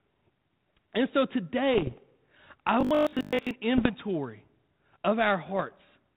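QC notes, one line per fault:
1.74–1.98 s, bit errors on an ADPCM link: around half a percent of bits flipped, and each corrupted sample throws off the decoder's step size and prediction, causing pops, rough bursts and brief level jumps.
2.81–3.51 s, robotic sound from repeated short buffers: a rigid 50 Hz metallic buzz, likely from about two-thirds of this stretch being refilled by repeating the last 20 ms while fresh audio is skipped.
3.75–3.93 s, bit errors on an ADPCM link: roughly 0.4% of bits flipped. The disturbed adaptation rings on for milliseconds after each error, causing crackly bursts and brief level wobbles within the band-limited sound.
5.56–5.64 s, bit errors on an ADPCM link: a lighter, brief patch of roughly 0.2% flipped bits, causing short pops and rasp as the decoder's step size recovers.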